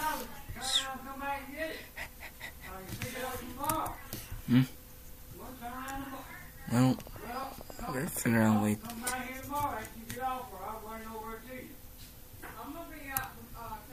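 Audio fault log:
6.90–8.26 s: train of clicks, about fifteen near-identical ticks at a steady 11.1 per second, likely interference; their even spacing sets them apart from random crackle.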